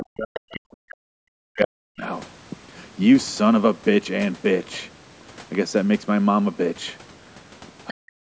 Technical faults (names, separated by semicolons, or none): speech suppressed in double talk; other side's voice leaking through